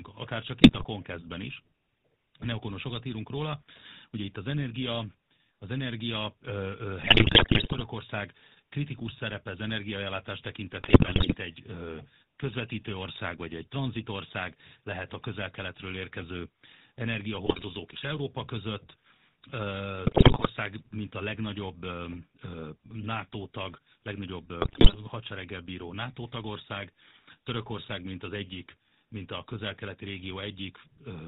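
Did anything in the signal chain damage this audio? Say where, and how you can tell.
Yes. The damage starts at the codec stage. The whole clip has the buzzy, gravelly roughness of the GSM full-rate codec at 13 kbps. Nothing gets through above 4 kHz. The excitation is rebuilt from regular pulses, keeping every third sample, so speech sounds coarse.

The radio link adds GSM bit errors at 0.62–0.85 s, 7.02–7.83 s, 10.8–11.35 s, 17.46–17.63 s, 20.06–20.47 s and 24.62–24.97 s. The third follows "kritikus szerepe az energiaellátás". The last precedes "hadsereggel bíró". Each burst brings squawks, pops and gargling. Flipped bits corrupt filter, pitch and gain values.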